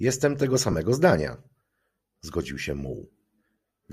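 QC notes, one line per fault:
0.72–0.74 s, lost LE Audio frames: a roughly 20 ms gap in the speech is filled by the decoder repeating the last spectrum with randomised signs, which fits two 10 ms LC3 frames. Voiced detail turns briefly into a noisy smear instead of dropping out.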